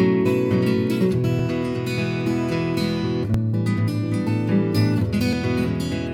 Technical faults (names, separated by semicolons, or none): dropped buffer (overrun)